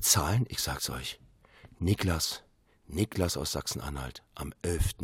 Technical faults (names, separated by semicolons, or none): none